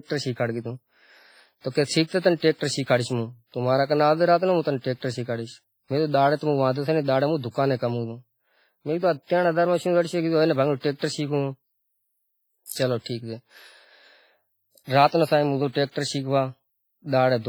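The whole speech clip has a ringing, washy quality, with a hiss that swells and fades along with the talking. That's the signature of heavy transform-codec damage, likely WMA compression at a low bitrate, something in the region of 24 kbps. The encoder uses long blocks, so its quantisation noise smears across tens of milliseconds, and quiet spectral detail gets thrown away entirely.

The same long blocks cause pre-echo at five points. At 1.69 s there's a soft hiss lasting about 57 ms before an attack. At 2.19 s a 46 ms smear comes just before "تنے ہوں ٹیکٹر شیکھاڑیش". At 12.66 s roughly 55 ms leads into "چلو ٹھیک". At 15.07 s about 51 ms precedes "نا صاحب ہوں گیو". At 15.91 s there's another of around 45 ms. Each time, a sharp onset lands late in a block, and noise sized for the loud part bleeds into the quiet gap ahead of it, so the attack comes across blurred instead of crisp.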